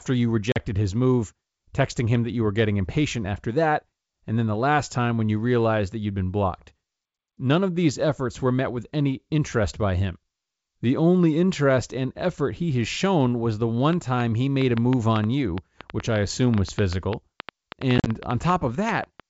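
At 0.52 s, just before "his move texting him", packet loss on an ADPCM call cuts a hard-edged 40 ms hole, consistent with a few lost packets. The decoder's predictor and step size no longer match the sender's, so the speech resumes slightly distorted before settling. A dropout followed by this brief mistracked recovery is what separates it from a simple mute.

From 13.93 s, right after "has shown was the", to 19.21 s, a train of clicks rides over the sound, in pauses too. There are around thirty similar pulses at an uneven 5.9 per second, peaking well above the speech, about 15 dB. They add sharp ticks without removing any audio, which is how they differ from the dropouts. They are likely interference from nearby equipment.

From 17.98 to 18.10 s, within that click train, another ADPCM packet loss scatters 60 ms of silence over 80 ms, its longest gap 40 ms. Each gap is followed by the same slightly distorted restart. 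Beneath all this, the G.722 coding at 64 kbit/s keeps speech clear up to 7 kHz.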